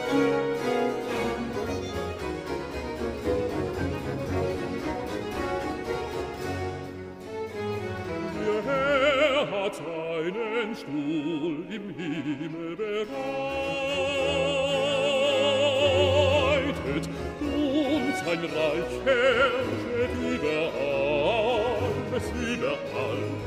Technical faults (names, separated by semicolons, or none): none